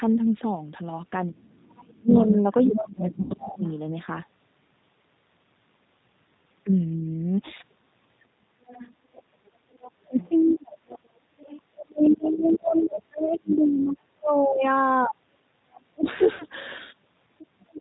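Throughout, the G.729 codec at 8 kbit/s gives the speech a rough, synthetic edge; a spectrogram shows nothing above 4 kHz and smeared, blocky harmonics.

From 1.28 to 3.65 s the talker is repeatedly ducked by speech suppressed in double talk, likely an echo canceller turning down both voices at once. The waveform shows gaps and dips of up to roughly 25 dB, adding up to about a second and a half. Within that stretch the other side's voice is likely leaking through, barely audible from 1.63 to 1.96 s and then plainly, only about 10 dB under the talker, from 2.63 to 3.74 s. It shows as a second set of harmonics overlapping the talker's.

At 3.22 s, 80 ms of audio is lost, which fits four packets. VoIP packet loss concealed by the speech codec stretches the last sound out and lets it fade, seen as a smeared continuation that decays in level.

The other side leaks in again from 8.67 to 10.55 s at around 25 dB down. 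From 10.07 to 16.07 s double-talk suppression cuts the talker in pieces for about four seconds in total, with drops as deep as roughly 35 dB, appearing as near-silent holes in the waveform. Meanwhile the far voice comes through clearly from 11.41 to 13.83 s, about 15 dB below the talker, and as a faint scrap at 15.73 to 15.80 s.

At 16.36 s a 40 ms loss, consistent with two packets, is again concealed with a short fading tail. From 17.56 s to the end the talker drops by roughly 30 dB once more.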